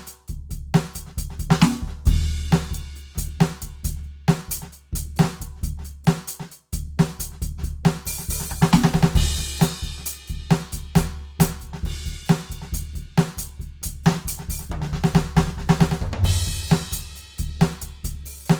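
From start to finish the music sounds grainy and rough, with sustained tones turning noisy rather than clean, and the damage is plainly audible. High content still reaches about 20.2 kHz, so the sound is not muffled. The cause is likely Opus compression in its CELT music mode at a rate that points to around 24 kbps: band energies are kept, but with too few bits the fine detail is filled in with folded or noise content.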